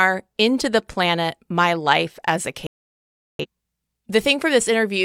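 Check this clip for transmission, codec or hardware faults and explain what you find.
One transmission fault stands out in this speech. Digital broadcast dropout, 2.67 to 3.45 s, just after "as a": the receiver stopped getting valid frames and muted, so the sound cuts to silence and resumes later, with that stretch lost.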